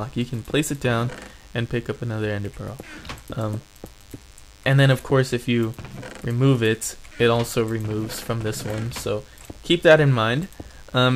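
A thin DECT cordless phone buzz runs under the whole recording, around 30 dB below the sound. A nearby handset's 100 Hz radio bursts, rectified by the audio circuitry, make it harsh and harmonic-rich rather than smooth like mains hum.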